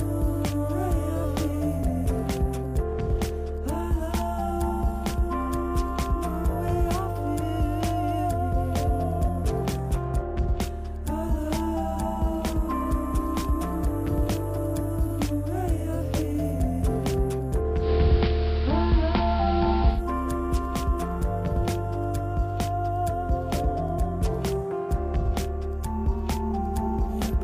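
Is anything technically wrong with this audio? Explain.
Yes. From 17.77 to 20.02 s, digital radio blending to analogue: a 137 ms cross-fade to AM adds hiss roughly 20 dB down and shifts level about 4 dB. This shows as a broadband noise floor on the spectrogram and a step in the waveform.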